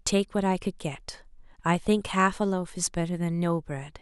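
No technical faults can be heard anywhere in the signal.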